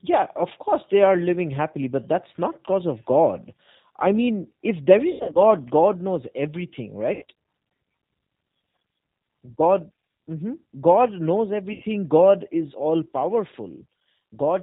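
It's a speech recording that's been through a G.729 codec the whole way, at 8 kbit/s, and you can plainly hear it. Everything above 4 kHz is gone, so it sounds boxy. Because the codec rebuilds the voice from a filter model, a pitch predictor and a few pulses per frame instead of sending the waveform, it comes out slightly rough and synthetic. On top of that there are three spots of VoIP packet loss concealed by the speech codec. The first comes right after "I mean if there", from 5.11 to 5.42 s: 180 ms lost in bits spread over 240 ms, with the longest gap 90 ms. Then there's a 90 ms hole just after "knows everything" at 7.13 to 7.23 s, and another 90 ms one at 11.73 to 11.83 s. In each, the decoder keeps stretching its last pitch and filter while fading the level, so you get a brief stretched, fading tail instead of the real sound. The gap sizes fit 30 ms packets.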